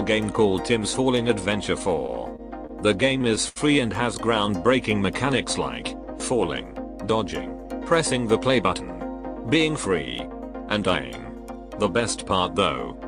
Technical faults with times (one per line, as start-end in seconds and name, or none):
1.95-2.71 repeated stalls (stutter)
3.09-3.58 repeated stalls (stutter)